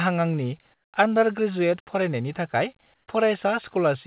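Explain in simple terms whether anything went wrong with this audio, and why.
Yes, two short pauses sound wrong. From 0.74 to 0.92 s and from 2.94 to 3.08 s, the real background is replaced by a flat, featureless hiss, noticeably quieter in the first gap and only slightly quieter in the second. This is comfort noise in place of the background, likely because the sending side stopped transmitting during the pause and the receiver filled it with made-up noise. Unlike a dropout, the gap never goes silent. It's a steady stand-in noise.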